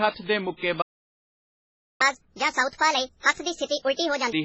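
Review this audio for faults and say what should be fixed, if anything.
Throughout the speech, the sound is watery and swirly, with s sounds smeared. This is heavy damage, likely from MP3 compression at a very low bitrate, consistent with about 16 kbps. Weak frequency lines drop in and out from frame to frame. A plain low-pass filter would dull the top end without that shifting, metallic texture. Encode at a higher bitrate, or use a codec designed for low-rate speech.

From 0.81 to 2.01 s the audio goes completely silent for about 1.2 s, then resumes. This is a playback stall, likely caused by the player running out of data or its thread being blocked. A dropout from packet loss would be brief and might leave a gap or concealment noise. This is a long, clean halt with nothing missing afterwards. Enlarge the playback buffer and keep decoding off any thread that can block.

From 2.01 to 4.33 s the speech runs at 1.5 times normal speed, with pitch raised by roughly seven semitones, then returns to normal. 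This is catch-up at higher speed: the player is resampling its backlog to win back the time lost in the stall. A time-stretch catch-up would speed things up without the chipmunk pitch rise, so the pitch shift identifies plain resampling. Catch up with pitch-preserving time-stretching at a gentler rate, or skip ahead for live audio.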